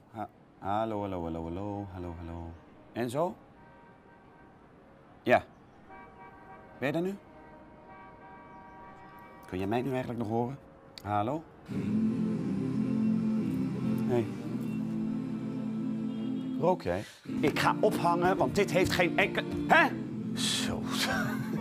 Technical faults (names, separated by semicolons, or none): none